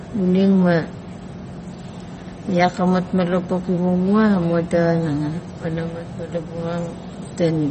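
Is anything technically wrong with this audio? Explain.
Yes. MP3 compression artefacts run throughout the speech, and they are plainly audible. Nothing is heard above about 8.3 kHz, which points to an encoder short of bits, likely at a low bitrate around 32 kbps. Starved of data, the encoder discards the top band outright and drops weaker frequency components that come and go between frames. The result is dull, watery speech with a swirling texture, chirpy sibilants and softened consonant attacks.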